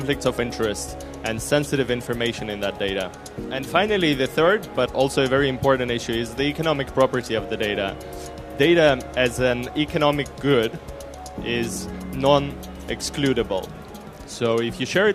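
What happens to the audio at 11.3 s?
Nothing goes wrong at 11.3 s; the audio runs through that moment intact, with no dropout, click or other fault.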